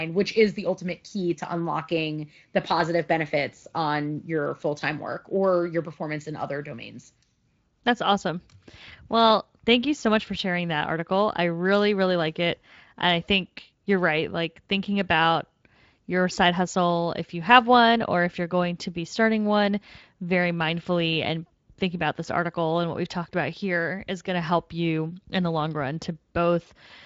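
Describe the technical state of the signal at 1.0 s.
At 1.0 s the speech carries no technical fault, with the Speex coding there adding only light, unobtrusive colouring and nothing above about 7.6 kHz.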